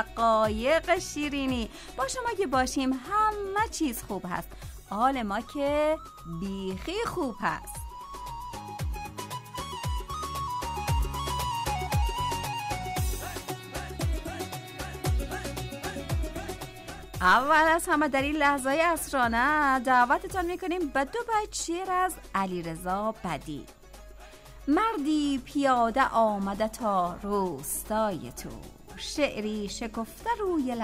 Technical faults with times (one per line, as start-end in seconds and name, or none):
none